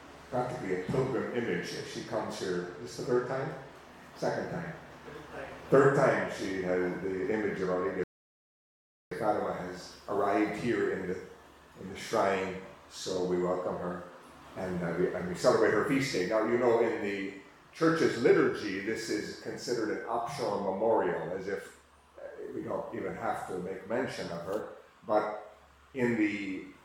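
At 8.04 s the audio drops into a rebuffering stall: playback ran dry and halted until more data arrived, resuming at 9.12 s exactly where it stopped. About 1.08 s is added, nothing lost, visible as a flat, empty gap in the waveform and spectrogram.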